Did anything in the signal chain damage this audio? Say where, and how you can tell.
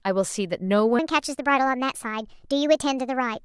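Yes. From 0.99 s to the end, the speech suddenly jumps to about 1.36 times normal speed, so it sounds hurried and chipmunky, sitting roughly five semitones higher than the opening second. That's a section at the wrong speed, and since pitch and tempo shift together in one step, the likely cause is an editing or playback stage reading that stretch against the wrong clock, rather than a pitch effect or a time-stretch.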